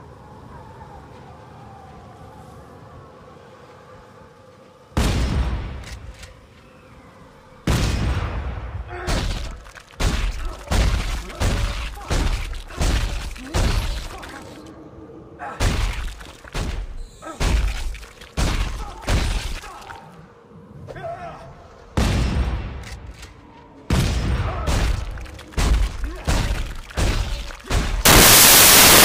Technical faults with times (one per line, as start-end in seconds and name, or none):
28.05-29.04 samples built from the wrong bytes